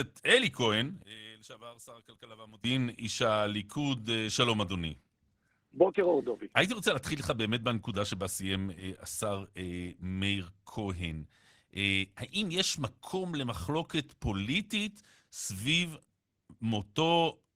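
From 1.03 to 2.64 s the speech collapses by about 21 dB, likely one channel inverted cancelling in mono; the waveform narrows to a thin sliver.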